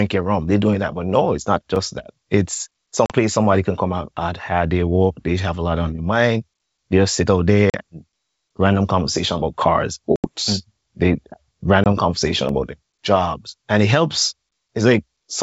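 At 1.76 s, just after "no it's not", a block of digital silence about 5 ms long cuts the speech. The sound drops out abruptly and comes straight back with no fade. At this length it is heard as a quick tick or dip, not as silence. The output buffer was likely not filled in time. The same fault returns at 12.49 s.

Packet loss on an ADPCM call causes four gaps in the speech. The decoder fills each lost stretch with silence. It then resumes with its adaptive predictor and step size out of step with the sender's. So after each hard-edged hole the speech comes back slightly distorted, until the decoder settles.

The first gap is at 3.06 to 3.15 s, just before "place somebody can come". About 40 ms is lost, which fits roughly two packets. The second is at 7.70 to 7.77 s, also about 40 ms. The longest is at 10.16 to 10.29 s, where about 80 ms goes missing, roughly four packets. The last is at 11.84 to 11.87 s, just before "conversation about their jobs", about 20 ms, around one packet. 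Throughout, the wideband band-split coding underneath, which fits G.722, adds little or no hiss of its own.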